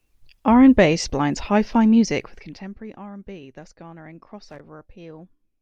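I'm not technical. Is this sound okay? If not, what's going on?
No. At 4.49 to 4.60 s there's a short burst of scratchy crackling. That's loose connector crackle: a worn or dirty plug contact briefly cutting in and out.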